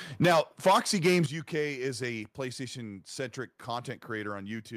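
From 0.22 to 1.2 s the speech sounds like microphone overload: peaks are flattened and harsh, with a crackly edge on the loudest syllables. It's likely input gain pushed about 9 dB past the converter's ceiling, clipping roughly a tenth of the samples. At 0.25 s voice and background both drop suddenly by about 3 dB, and at 1.26 s by about 10 dB more. That's the microphone volume stepped down, likely the call software cutting input gain after hearing the distortion.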